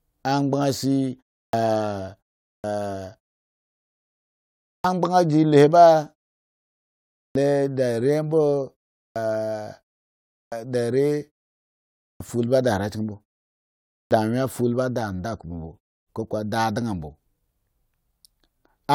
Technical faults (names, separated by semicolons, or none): clipped start after a pause